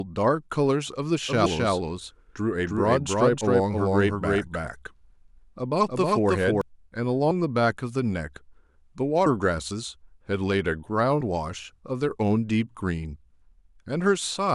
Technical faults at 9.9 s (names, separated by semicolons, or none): none